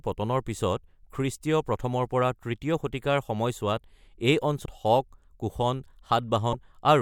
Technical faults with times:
4.64-4.67 broken MP3 bit reservoir
6.52-6.54 broken MP3 bit reservoir

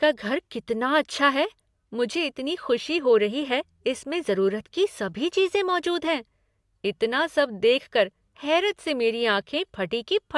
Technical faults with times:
none

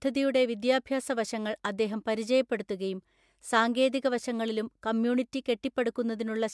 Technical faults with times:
none

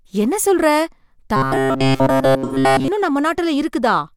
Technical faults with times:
1.36-2.88 robotic sound from repeated short buffers
2.44-2.55 AAC frame loss with concealment

